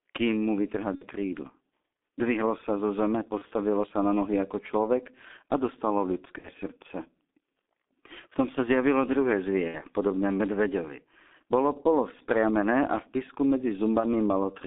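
From start to finish the speech passes through a G.723.1 codec, heavily damaged. The band is squeezed to roughly 200 Hz to 3.6 kHz, so everything sounds muffled, and the slow-updating voice model leaves a hoarse grain and smeared consonants, which fits a very low rate near 6.3 kbit/s. Unlike plain band-limiting, the roughness sits inside the voice itself rather than just dulling its top end.

Five VoIP packet losses concealed by the speech codec follow. The first runs from 0.95 to 1.06 s, right after "kým mu". The next is at 3.38 to 3.46 s, between "sa zo zeme" and "sa na nohy ako". Another falls at 6.38 to 6.49 s, after "ako človek a dostalo", then 9.68 to 9.81 s and 14.00 to 14.05 s. In each, the decoder keeps extending the last pitch and vocal-tract shape while turning the gain down. The sound smears into a fading buzzy tone or coloured noise rather than going silent or clicking, as a simple dropout would. 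The 60 ms losses, at about 1.0, 6.4 and 9.7 s, suggest two 30 ms frames each. The others fit a single frame. Because each frame leans on the previous one, the voice stays thin and distorted briefly after each gap.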